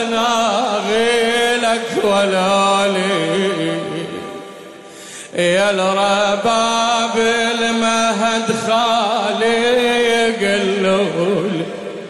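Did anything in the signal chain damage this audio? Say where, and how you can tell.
Yes. Throughout the sound there is a swirly, watery texture and smeared attacks. This points to damage at the codec stage, likely MP3 compression at a low bitrate around 64 kbps, where the encoder let weak frequency lines switch on and off between frames.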